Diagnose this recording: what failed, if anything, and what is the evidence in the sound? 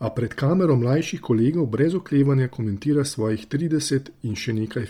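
Codec stage: the speech is breathy and grainy throughout, likely Bluetooth LC3 compression near 32 kbps. Its spectrogram shows zeroed upper bands refilled with noise in 10 ms blocks.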